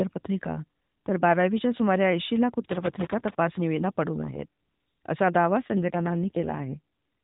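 Speech carried over a narrowband mobile link, with everything above 4 kHz missing and light AMR-NB coding texture throughout. The fault is an AMR rate drop from 5.72 to 6.80 s. For about a second the voice turns rougher, buzzier and more synthetic. The bandwidth stays the same and nothing drops out. The sound points to the codec stepping down from 12.2 to about 5.9 kbps, as a weak radio link would force, before recovering.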